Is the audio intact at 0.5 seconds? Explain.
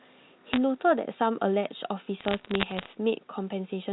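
No. From 0.53 to 0.57 s the speech carries bit errors on a digital phone line. Flipped bits in the logarithmically coded telephone samples each corrupt a single sample, and a hit on a high-order bit, or on the sign bit of a loud sample, throws that sample far from its true value. With an error rate of around half a percent, this produces a short burst of sharp ticks and crackle over otherwise unchanged speech.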